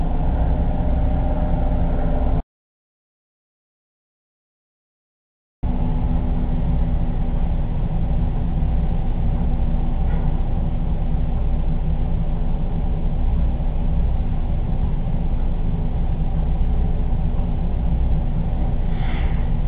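At 2.40 s the sound just stops dead, and nothing comes back until 5.63 s. That's an audio dropout to silence, roughly 3.2 s of silence with no room tone or noise floor underneath. The input was likely lost for that stretch, maybe a cable, link or mute, while the recorder kept writing empty samples. Whatever happened in that gap is simply gone, and the audio cuts back in mid-flow.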